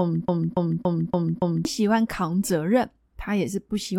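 A stall in the player, encoder or stream likely left it resending the last fragment it held, so this speech clip opens with a broken-record loop: a 0.28 s piece repeats back to back five times, already under way at the start and lasting until 1.65 s, and the audio that belonged in that span is lost.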